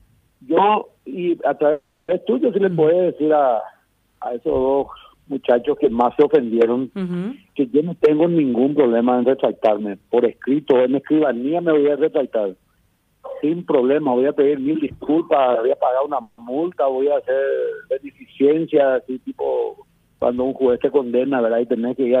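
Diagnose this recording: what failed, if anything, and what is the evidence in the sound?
Two call audio freezes stall the stream, at 1.71 to 2.11 s and 16.22 to 16.41 s. Each time the last sound is carried on as a fading buzz or hiss, about 370 ms and 160 ms of fill, and then the audio resumes exactly where it stopped with nothing lost, only delayed. That points to the network stage, most likely packets held up in transit so the jitter buffer ran dry and the receiver stretched its last output until they arrived.

A jitter buffer speed-up runs from 14.59 to 16.08 s, where the audio plays at 118% of normal rate with unchanged pitch and sounds hurried. This is the receiver's buffer stage trimming excess delay: after delayed audio arrived in a bunch, it repeatedly cut out pitch-period-length slices, roughly 300 ms in total, to bring its fill back down to target.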